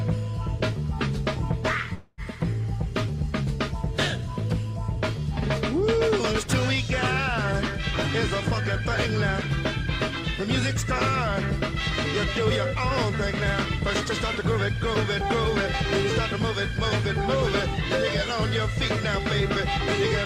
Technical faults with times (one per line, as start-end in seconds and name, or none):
1.93-2.21 call audio freeze